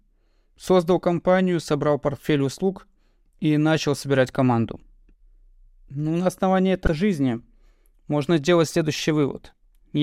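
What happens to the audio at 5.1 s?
Nothing goes wrong at 5.1 s; the speech runs on intact through that moment with no dropout, click or distortion.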